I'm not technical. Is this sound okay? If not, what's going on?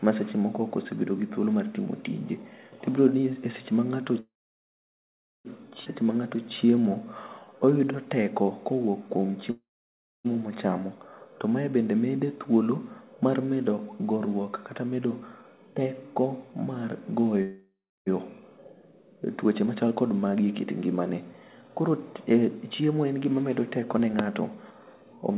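No, the sound has several problems typical of an internet call.

Call audio freeze, three times. The likely cause is that pieces of the call got held up in transit, so the receiving side ran out of sound to play. It filled the wait with a fading buzz and then near-silence, and picked up exactly where it had stopped once the sound arrived. Nothing is lost, but a pause is inserted. This happens right after "seche ma" from 4.2 to 5.47 s (about 1.25 s, mostly silent), from 9.51 to 10.27 s (about 0.74 s), and after "teko mar" from 17.42 to 18.08 s (about 0.64 s).

Skip ahead, at 5.85 to 5.88 s. Just after the first freeze, the system threw away a chunk of audio to catch up, because newer sound was already waiting. Playback jumps forward almost seamlessly, but roughly a second of sound is simply missing.

Jitter buffer slow-down, from 6.02 to 9.33 s. The system's small reserve of waiting audio was running low, so it stretched the sound by repeating tiny slivers many times over. 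That added about 0.29 s, making this stretch play at about 92% speed. The pitch stays the same, but sounds are drawn out and may wobble slightly.

Jitter buffer speed-up, twice. Here the opposite happened: too much audio had piled up, so the system trimmed tiny slivers out to reduce the delay. The sound plays faster at the same pitch and can feel rushed. This happens between "mar medo" and "teko mar" from 14.38 to 15.44 s (about 109% speed, roughly a tenth of a second removed), and from 19.65 to 25.37 s (about 108% speed, around half a second removed).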